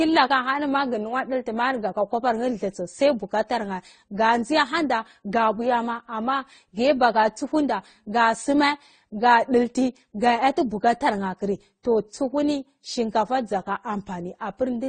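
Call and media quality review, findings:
Speech band-limited throughout, nothing above 9 kHz. Stacked, dissimilar artefacts heard together. Likely transcoding between lossy codecs. The mixed artefact signature fits a low-bitrate Vorbis-to-Opus-to-AAC-LC chain, roughly 46, 24 and 32 kbit/s. Each re-encode spends bits re-coding prior damage and adds its own. Lowest cut-off in chain persists.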